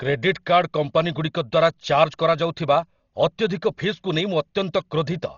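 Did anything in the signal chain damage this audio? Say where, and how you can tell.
Yes, at the codec stage: throughout, the speech is dull with nothing above 7 kHz and rough, fluttering noise around tones, likely heavy Dolby Digital compression at roughly 32 kbps filling unfunded lines with dither. A plain low-pass filter would not add that flutter.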